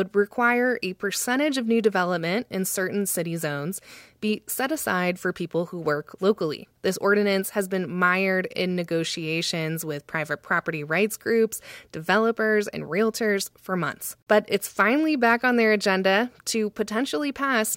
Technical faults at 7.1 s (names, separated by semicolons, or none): none